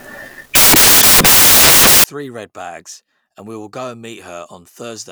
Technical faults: samples built from the wrong bytes

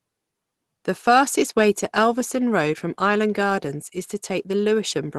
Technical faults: none

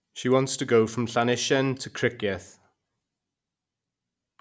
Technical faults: none

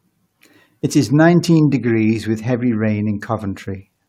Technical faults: none

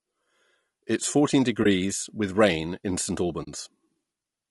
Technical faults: low-delay AAC compression; AAC frame loss with muting

